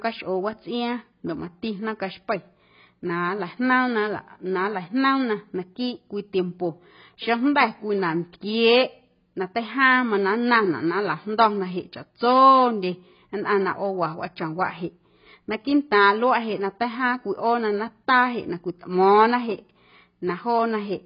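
The speech sounds dull and smeared from start to finish, with nothing above about 5.1 kHz, so sibilants lose their edge and turn fizzy while held vowels take on a watery warble. This points to heavy AAC compression, likely AAC-LC at a very low rate, roughly what a 16 kbps stream would give. The encoder drops the top band and quantises the remaining frequency lines so coarsely that parts of the spectrum go empty or fill with substitute noise.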